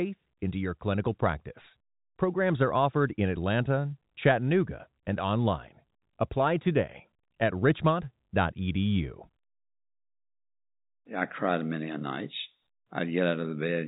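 No faults are audible in this speech; the band stops near 3.8 kHz, as expected of G.711 telephone coding, with at most a faint level-following quantisation hiss.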